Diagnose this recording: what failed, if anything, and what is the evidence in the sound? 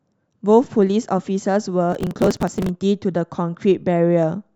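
Processor overload crackle at the driver/buffer stage, 1.92–2.69 s: a gritty burst in the speech, as dozens of short buffers, roughly 5 ms each, missed their deadlines and were skipped.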